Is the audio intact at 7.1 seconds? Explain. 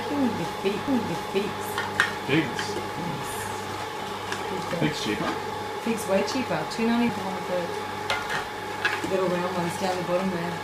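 No. A CD skip occurs at 7.09 s. A jolt or disc flaw threw the laser onto a different turn of the spiral. Playback mutes for only a few milliseconds, with a tick. It then resumes from another point, so the sound jumps abruptly.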